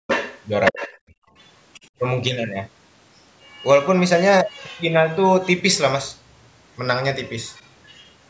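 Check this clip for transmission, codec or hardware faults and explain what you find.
Three echo-canceller faults affect this speech clip, all tied to a call's echo handling. The call microphone path itself, including its band limit at 8 kHz, is working as intended.

Background gated by the echo canceller, 0.00 to 0.07 s and 1.11 to 1.34 s: the canceller cut the microphone gain hard while the loudspeaker was active. The room sound falls away by about 38 dB and about 31 dB respectively, then returns as the gate releases.

Other side's voice leaking through, 0.07 to 1.88 s, 3.46 to 3.87 s, 4.46 to 4.83 s, 5.41 to 5.46 s and 7.24 to 8.10 s: this is likely residual loudspeaker echo the canceller failed to remove. A second voice rides under the talker. In the first stretch it is only slightly quieter. Later it is faint, then very faint.

Speech suppressed in double talk, 0.72 to 0.82 s: with both sides talking at once, the canceller likely could not separate the near talker from the echo and attenuated everything. 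The talker's voice dips sharply, by roughly 25 dB, for about a tenth of a second.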